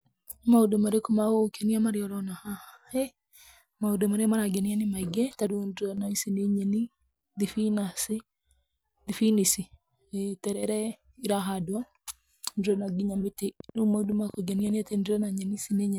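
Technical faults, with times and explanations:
5.47 to 5.98 s and 10.53 to 10.63 s, one channel drops out: the speech abruptly falls by about 6 dB and recovers just as suddenly, the second dip only a tenth of a second long. This is likely one stereo channel briefly losing signal, so the mono sum carries only half the shared content.
13.60 to 14.71 s, train of clicks: roughly ten sharp, similar ticks at an uneven pace of about 9 per second, peaking near the level of the speech itself and audible over it. The regular pulse shape points to interference or a faulty connection injecting repeated impulses.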